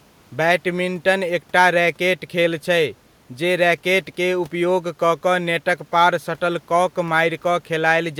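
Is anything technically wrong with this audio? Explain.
No, the speech signal shows no technical faults.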